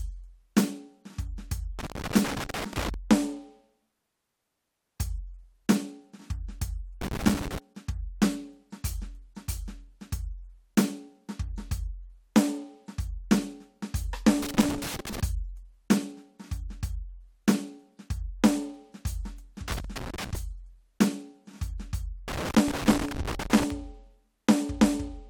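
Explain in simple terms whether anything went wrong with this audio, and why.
Something physical went wrong: a worn or dirty contact in a cable plug or socket kept losing and regaining its connection, which is loose connector crackle. Each time it flickered, the music was chopped into tiny fragments, so you hear rough bursts of scratching laid over the track. It happens five times: 1.79 to 2.94 s, 7.01 to 7.58 s, 14.42 to 15.20 s, 19.68 to 20.39 s, and 22.28 to 23.70 s.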